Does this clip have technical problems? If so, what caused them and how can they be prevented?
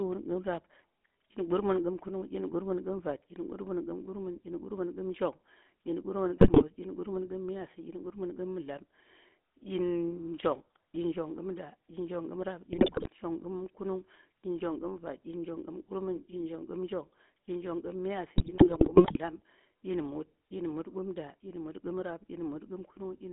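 Yes. The GSM full-rate codec colours the whole clip with a buzzy, gravelly roughness. It models the vocal tract and excites it with a sparse pulse train, which fits a 13 kbps full-rate stream, and the line band stops at 3.5 kHz. Preventing this means carrying the call over a wideband codec such as AMR-WB.

GSM bit errors occur at 6.38 to 6.63 s, 12.72 to 13.07 s and 18.36 to 19.18 s, where the speech squawks, pops and gargles. Corrupted filter, pitch and gain values reached the decoder, distorting the spectrum and level frame by frame. A stronger radio link, better channel coding and decoder-side error concealment prevent this.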